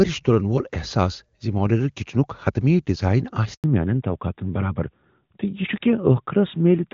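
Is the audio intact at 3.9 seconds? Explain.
No. From 3.64 s to the end, a fallback to narrowband replaces HD Voice with an older narrowband codec, removing everything above 4 kHz. Speech turns duller and rougher, and a spectrogram shows the upper band abruptly emptying at 3.64 s under a flat ceiling.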